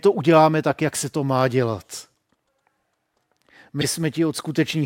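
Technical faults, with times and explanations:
3.81–3.85 s, corrupt frame decoded: a single damaged compressed frame was played with misread gains and codes, throwing a brief, loud burst of energy at the wrong frequencies, peaking around -5 dBFS. It lasts about one frame.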